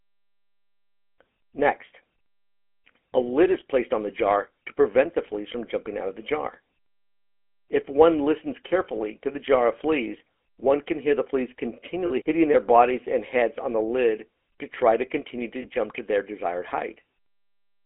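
GSM full-rate codec, throughout: the speech has the gravelly, buzzy roughness of the original GSM coder, a damage that is plainly audible, consistent with 13 kbps full rate. The coder models the vocal tract and excites it with a sparse, regularly spaced pulse train, discarding two of every three excitation samples, so detail is rebuilt coarsely. The line band spans roughly 250 Hz to 3.4 kHz, leaving the sound thin and narrow.

Lost GSM frames, at 12.06 to 12.11 s, between "can hear the fleas" and "hitting their bodies and", and at 15.62 to 15.66 s, between "try to continue to" and "to their desired": the decoder held the last good frame's parameters, producing a brief rough, metallic ring rather than silence. The first gap lasts 40 ms, which fits two lost frames. The second lasts about 20 ms, which fits a single lost frame.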